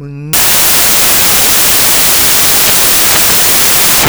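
From 0.33 s to the end, the speech turns into loud, harsh broadband noise. The samples are built from the wrong bytes. Each value is assembled from misaligned or swapped bytes, so the fast-changing low bits dominate.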